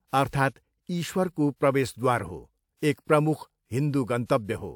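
At 0.30 s a short wash of hiss rises out of near-silence and runs for about 36 ms, until 0.33 s, where a sharp onset in the speech lands softened and smeared. This is pre-echo. The transform codec spread its quantisation noise, scaled for the loud attack, across the whole block, so it leaks into the quiet moment ahead. Unlike reverb or ordinary echo, which trail after a sound, this noise arrives before it.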